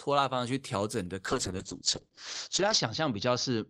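From 1.27 s to the end there's a call bitrate drop: the encoder falls from 32 to 8 kbps, bandwidth shrinks from 20 kHz to 8 kHz, and the speech turns rough and muffled.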